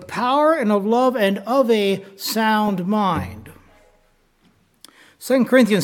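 No audible technical faults occur anywhere in the clip.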